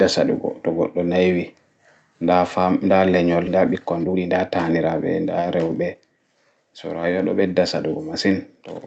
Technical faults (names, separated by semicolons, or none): skip ahead; jitter buffer speed-up